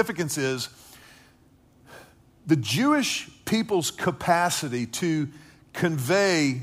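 Nothing stood out on listening to this speech recording.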